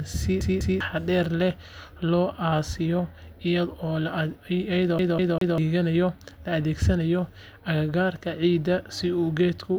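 At 0.41 s the speech catches in a CD stuck on one turn. A single 0.2 s slice repeats twice, with a brief mute at each jump, until 0.80 s, just before "leh loo". The same stutter returns from 4.99 to 5.58 s, this time looping three times with the same 0.2 s length. That identical period suggests a scratch throwing the laser back one track at the same point on every rotation.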